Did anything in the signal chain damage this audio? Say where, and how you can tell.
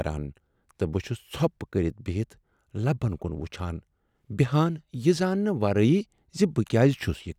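No, nothing along the chain seems to have touched this speech recording, and there's no moment where any stage gives itself away.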